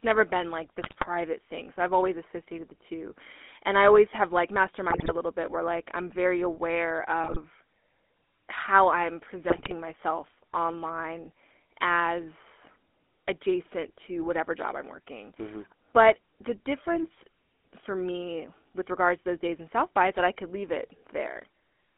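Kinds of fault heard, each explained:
GSM full-rate codec: The speech has a buzzy, gravelly roughness throughout. Nothing passes above about 3.5 kHz. This fits the old 13 kbps GSM coder.
GSM bit errors: Corrupted frames reach the decoder and cause brief squawks and gargling. Four bursts occur, from 0.82 s after "never been like" to 9.75 s.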